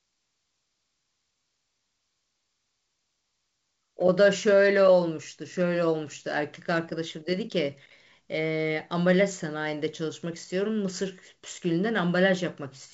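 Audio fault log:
No faults heard anywhere in this speech.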